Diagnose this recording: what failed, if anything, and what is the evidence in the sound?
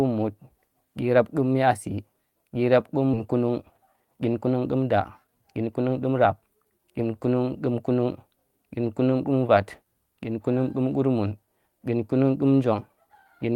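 Skip ahead at 3.13 to 3.15 s: at the network and jitter buffer stage, roughly a second of speech was discarded while later audio was already queued. Playback jumps straight across with no filler and no silence, so the two sides join almost directly.

Jitter buffer speed-up from 3.25 to 6.8 s: the buffer was holding too much delay and shortened it by repeatedly cutting out pitch-period-sized pieces. Speech runs at about 109% speed with pitch unchanged and sounds hurried, removing roughly 300 ms overall.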